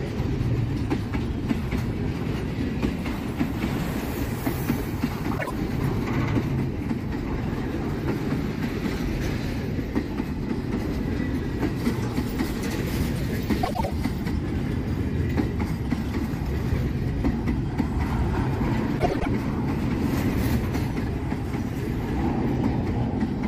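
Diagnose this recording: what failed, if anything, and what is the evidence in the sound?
Frames out of order, at the codec or network stage: at 5.38 to 5.51 s two adjacent blocks of about 26 ms swap places, and at 13.63 to 13.91 s and 18.99 to 19.27 s blocks of about 105 ms swap. Each produces a garbled flutter, and no time is lost.

Pre-emphasis left on, at the playback or storage stage: from 11.76 to 14.31 s the treble rises by about 8 dB at 10 kHz relative to 1 kHz, consistent with the CD 50/15 µs curve. The matching de-emphasis was not applied, so the sound turns thin, bright and sibilant.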